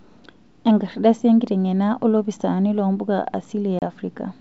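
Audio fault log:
3.79–3.90 s packet loss on an ADPCM call: a few packets, 30 ms, became silence, knocking the decoder's predictor and step size off the sender's, so speech re-enters slightly distorted, then settles.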